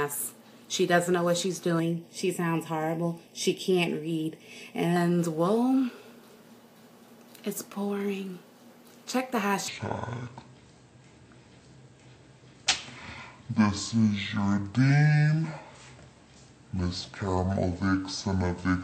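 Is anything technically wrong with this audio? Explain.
Yes, two faults stand out. From 1.80 to 4.96 s there is channel delay (comb filtering). One channel runs a fraction of a millisecond late, and summing to mono cancels shared content at evenly spaced frequencies starting around 1.5 kHz. The sound turns hollow and phasey, and a spectrogram shows fixed, regularly spaced dark horizontal notches.

From 9.68 s to the end, a section plays at the wrong speed, 0.548 times normal, likely from being fitted to the wrong clock. Pitch drops by about ten semitones, so everything sounds deep and sluggish. On a spectrogram, harmonics shift downward and spread out in time, and the waveform looks stretched.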